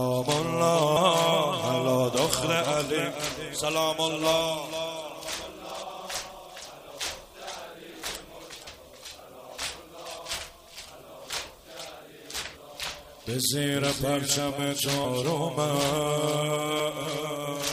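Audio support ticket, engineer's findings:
Compressed frames skipped. Four forward jumps in the audio, at 0.96 s, 5.81 s, 8.66 s and 10.18 s. Each join is a short smeared blip, not a hard click. Roughly 150 ms, 200 ms, half a second and 300 ms of material lost. Probable component: file transport or decoder. Whole frames were missing or rejected as damaged. The skips suit a frame length near 26 ms. Overlapping neighbour frames blur each join.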